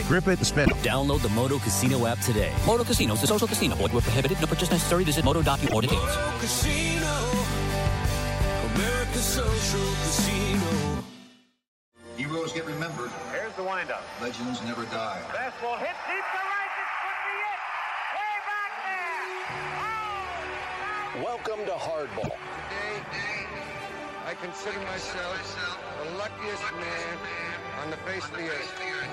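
Three short glitches break up the sound, each about 0.11 s long, at 0.62, 5.63 and 22.19 s. That's damaged data in the compressed stream: the decoder hits corrupted frames, loses sync for a moment, and glitches while it hunts for the next valid frame header.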